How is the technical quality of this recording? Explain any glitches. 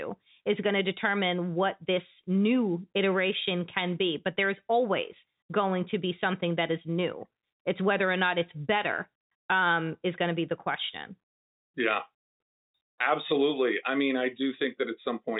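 The technical quality holds up, and there are no glitches to explain in this speech recording.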